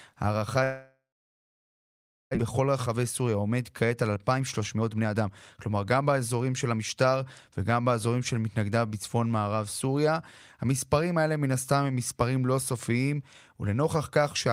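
From 0.63 to 2.37 s the sound smears into a fading buzz, then about 1.3 s of silence, and returns with roughly a second missing, likely a long network dropout. From 2.45 to 7.05 s the speech runs hurried at 115% speed with unchanged pitch: a jitter buffer speed-up trimming pitch-period slices to shed around 0.7 s of built-up delay.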